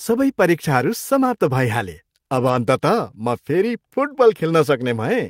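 From 2.35 to 2.53 s the speech turns briefly rough and grainy, then recovers. This is a lost packet rebuilt from error correction. Several separate packets went missing, about 100 ms of audio, which fits roughly five packets. Each following packet carried a cheap, low-bitrate copy of the one before it. The decoder played those copies instead. So nothing drops out. The patched stretch just sounds coarser and noisier than the audio around it.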